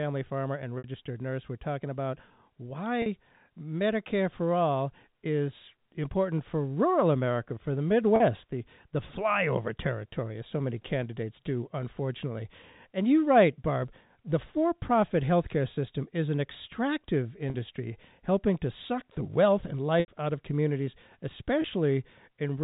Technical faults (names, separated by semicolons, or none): packet loss with pitch repetition